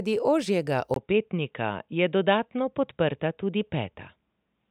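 At 0.94 s the speech turns dull and boxy through to the end, after a 20 ms silence, with nothing above 3.8 kHz, a faint new background noise and no real change in level. This is likely the input switched to a poorer device.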